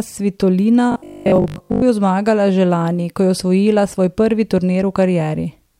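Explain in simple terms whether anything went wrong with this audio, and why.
Robotic sound from repeated short buffers appears from 0.92 to 1.84 s. For that stretch the speech turns into a stiff, metallic buzz. It still roughly follows the talking. The likely cause is new audio arriving too slowly. To cover the gaps, the playback kept repeating a tiny slice of sound, about 20 ms long, for most of the stretch. Those repeats impose a fixed 50 Hz hum, which is what makes the voice sound mechanical.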